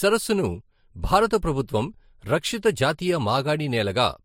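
Transcoding between lossy codecs runs throughout: nothing remains above 16.5 kHz, and layered artefacts suggest speech likely passed through Vorbis, then MP3 at roughly 60 kbit/s.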